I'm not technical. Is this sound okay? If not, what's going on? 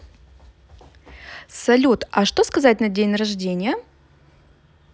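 Yes, nothing stood out as wrong when listening to this speech recording.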